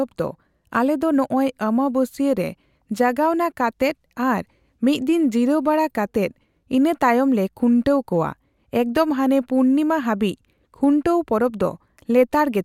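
Speech recording with no audible technical faults.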